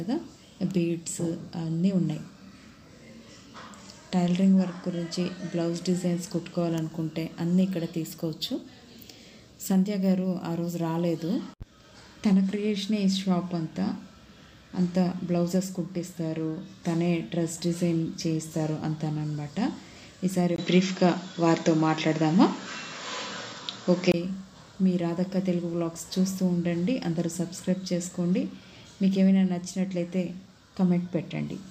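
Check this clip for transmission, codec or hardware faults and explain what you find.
One hardware fault stands out. From 20.56 to 24.14 s the input likely switched to a poorer device: after a 20 ms gap, everything above 7.5 kHz vanishes, so the sound turns dull and boxy, shifts a few decibels in level, and carries a new, faint noise floor until it clears again.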